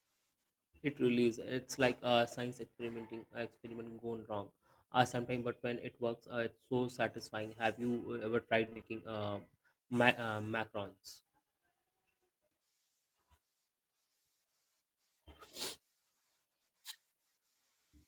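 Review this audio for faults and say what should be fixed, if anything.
Repeated packet loss (robotic sound), 8.65–8.85 s: gaps up to 20 ms, half the span patched by repeating earlier sound, giving choppy speech with repeated, smeared spectrogram frames. A larger jitter buffer and forward error correction on the network link would prevent this.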